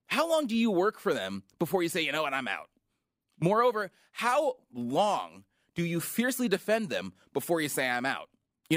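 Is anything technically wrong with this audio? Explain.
No, nothing is technically wrong with this audio.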